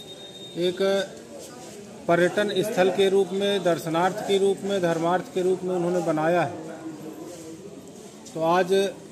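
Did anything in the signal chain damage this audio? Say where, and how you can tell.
No, nothing audible points to damage at any stage of the signal chain.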